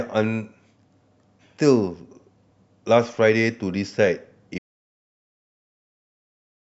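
An audio dropout to silence begins at 4.58 s and lasts to the end of the clip, about 2.1 s. The speech cuts off mid-flow into silence with no room tone, likely because the input was lost while the recorder kept writing silence.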